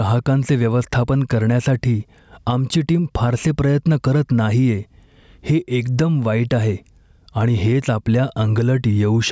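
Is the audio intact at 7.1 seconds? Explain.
No. Gain pumping runs through the whole clip, including 7.1 s, likely from excessive gain and a fast limiter. The gain swings by around 10 dB, seen as a breathing, flattened waveform envelope.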